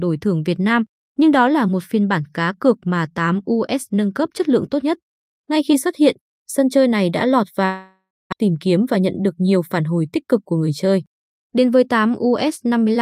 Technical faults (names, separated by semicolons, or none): long network dropout; jitter buffer speed-up